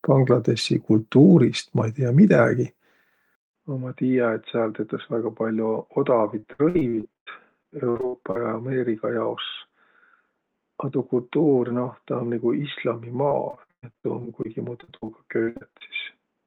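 At 3.35 s there's a 200 ms silence, then the speech goes dull and a bit quieter for the rest of the clip, with nothing above 3.8 kHz. That's likely the input switched to a poorer device. From 6.39 to 8.37 s and again from 13.29 to 15.83 s, repeated packet loss gives a choppy, robotic sound. Gaps of up to 99 ms and 118 ms get patched by stretching the previous sound, and roughly a quarter to a third of each stretch is concealed that way.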